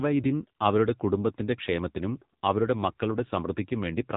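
From start to finish the speech sounds boxed-in and phone-like, with nothing above about 3.8 kHz, and the voice has a buzzy, synthetic edge. This is the AMR narrowband mobile codec at work, heavily damaged: it samples at 8 kHz and rebuilds speech from a vocal-tract model excited by a few pulses per 5 ms subframe. The strong buzz points to one of its low modes, which fits roughly 6.7 kbps.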